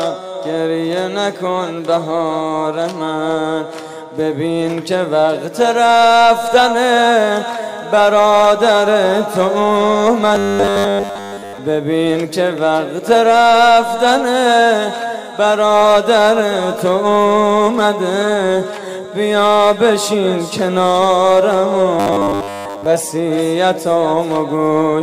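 A rigid, metallic buzz at 100 Hz replaces the sound from 10.35 to 11.58 s, entirely, and covers most of it again from 22.00 to 22.86 s. This is robotic sound from repeated short buffers, likely from starved playback looping a roughly 10 ms chunk.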